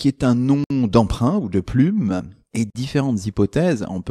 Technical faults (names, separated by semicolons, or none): gap at a join of encoded pieces